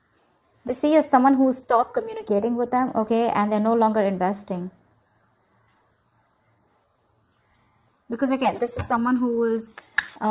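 No technical faults can be heard anywhere in the recording; the signal stays continuous and stable throughout.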